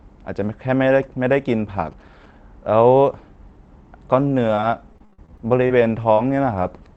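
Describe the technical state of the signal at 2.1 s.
Faint galloping dit-dit-dit of short 217 Hz buzzes, about 30 dB below the speech, runs from 1.53 to 2.26 s: GSM signalling bursts from a nearby 2G phone, rectified by the audio circuit.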